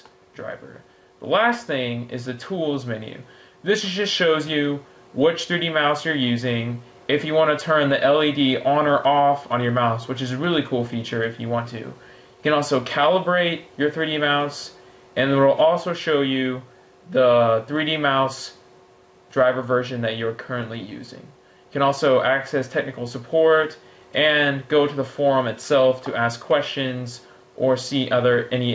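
Throughout the recording loud and quiet moments sit unnaturally close in level and the whole thing feels squashed. That is gain pumping, with the level swinging by around 5 dB. The likely cause is input gain set far too high for the microphone, with a fast limiter or compressor clamping down on each peak. The audio also passed through call microphone processing, with nothing above 8 kHz.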